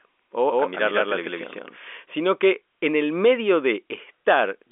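Speech over a telephone line, band-limited to below about 3.7 kHz. A doubled audio track runs from the start until 1.76 s, ending just before "sino que en el". A second full-band copy trails by roughly 150 ms at about equal level, with no decay. It stops abruptly. A second capture path or misaligned edit is the likely cause.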